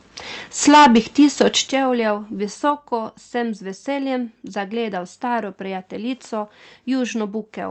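Microphone overload from 0.67 to 1.48 s in this speech recording gives the loudest syllables a harsh, crackling edge. The peaks run about 10 dB past the converter's limit and around a tenth of the samples have their tops flattened, likely because the microphone's input volume was set too high for the converter. Microphone volume stepped down at 0.69 s, 1.68 s and 2.70 s, just before "sem z veseljem zagledal". The voice and background drop suddenly by about 2 dB, 9 dB and 3 dB, likely because the call software detected the overload and cut the device's input gain in single steps. The audio has a top end that stops near 8 kHz and a coding texture, consistent with the WebRTC call path running Opus at roughly 32 kbps.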